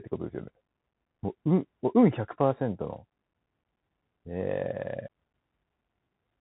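From start to finish the speech has gone through a Bluetooth CVSD headset codec. Nothing above about 3.9 kHz survives, so it's boxed-in and narrow. The one-bit delta coding can't keep pace with sharp changes, leaving plainly audible scratchy sibilants and a grainy hiss underneath.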